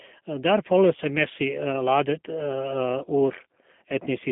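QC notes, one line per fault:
Throughout: G.729 codec rebuilds the speech from a vocal tract model and sparse pulses, fitting an 8 kbit/s link; nothing above 3.6 kHz, leaving a plainly rough, synthetic texture.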